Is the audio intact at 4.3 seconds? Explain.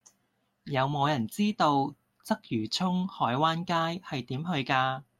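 Yes, the speech is intact at 4.3 seconds, with no fault at that moment.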